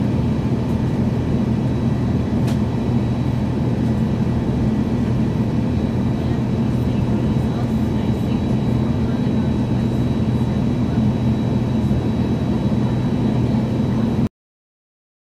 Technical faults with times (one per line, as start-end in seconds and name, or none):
14.27-15.35 cut-off end